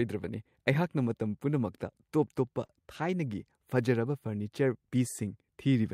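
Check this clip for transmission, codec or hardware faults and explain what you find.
One transmission fault is audible in this speech. From 2.65 to 2.83 s, a sound drags on with a faint buzz or dip: a short stall from a late packet. The jitter buffer emptied, so the receiver stretched the last sound by 38 ms until the packet arrived, and nothing is lost.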